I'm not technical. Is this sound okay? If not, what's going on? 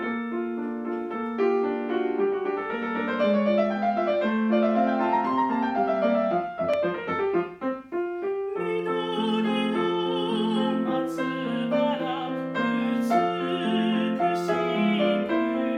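No, there is one fault: a loud pop from 6.74 to 6.76 seconds. It is a single sharp snap, clearly louder than the surrounding audio, and the sound carries on underneath it without a break. What you hear is a sudden jolt of electricity added on top of the recording, most likely from a plug being moved, a switch being flipped, or a static spark reaching the equipment.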